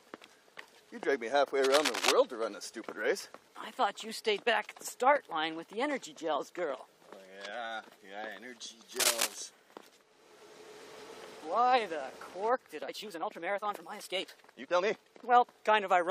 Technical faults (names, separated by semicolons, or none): cable scratch noise; time-stretched section